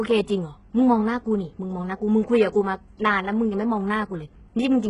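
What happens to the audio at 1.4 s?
At 1.4 s the speech carries the same damage heard across the whole clip: bright but gritty, lispy treble with nothing above 10.9 kHz. The likely cause is HE-AAC compression at a very low bitrate, around 12 kbps. Its upper band is rebuilt from copied lower bands rather than simply cut off, which separates it from a plain low-pass.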